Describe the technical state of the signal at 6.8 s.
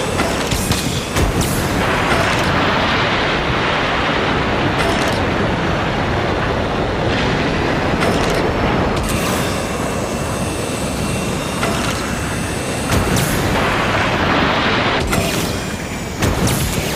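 At 6.8 s the signal is intact, with no dropout, distortion, glitch or other fault to be heard at that point.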